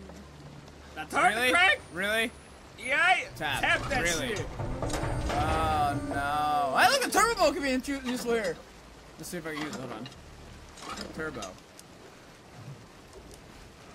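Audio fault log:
No faults are audible anywhere in the clip.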